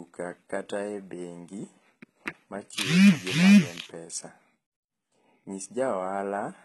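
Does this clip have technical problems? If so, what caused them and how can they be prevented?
Yes. Throughout the speech there is heavy damage consistent with HE-AAC compression. Nothing sounds above about 11.8 kHz. The treble sounds synthetic. S sounds come out gritty and lispy, with a metallic edge. This is likely caused by spectral band replication, where the codec keeps only the lower spectrum and rebuilds the top by copying lower bands upward. The damage fits a very low bitrate of around 16 kbps. To prevent it, encode at a higher bitrate or use plain AAC or another full-band codec.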